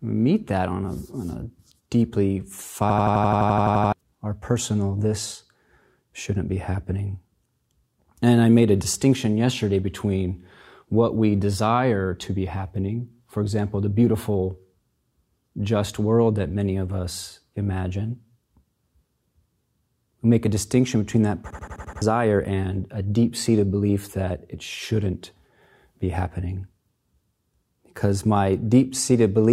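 System hang loop at 2.90–3.93 s, after "a deeply", and at 21.50–22.02 s, after "a distinction between that". The system froze while the hardware kept replaying one 85 ms buffer, which fits 4096 samples. The result is an 11.7 Hz machine-gun stutter that wipes out about a second of speech, then about half a second.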